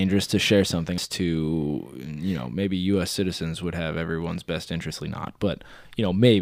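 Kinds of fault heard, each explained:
Damaged data in a compressed stream: Some bytes of the compressed speech were corrupted. The decoder misreads those frames, loses sync and hunts for the next frame header. A brief blip results, at 0.98 s after "to share" and 4.90 s after "would have everyone's best".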